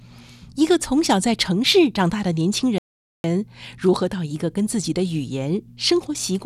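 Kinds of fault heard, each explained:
Playback stall: the speech cuts out abruptly at 2.78 s and stays silent for about 0.46 s before resuming at 3.24 s. The likely cause is the player running short of data or its thread being blocked, so output halts until it recovers.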